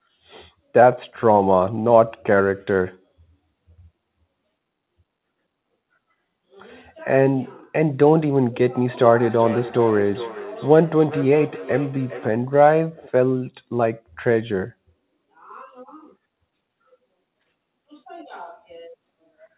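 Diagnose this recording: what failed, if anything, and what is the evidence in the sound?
The failure is in call processing: a feedback echo between two devices, from 8.86 to 12.41 s. Each phrase comes back at roughly 400 ms intervals, thinner and ringier, peaking at about 13 dB under the direct speech. Two devices on the same call share the room, so one plays out what the other's mic sent and that mic catches it again. Each echo canceller only knows its own playback, so this loop slips through. The band stops at 4 kHz, which fits a narrowband call codec like G.711.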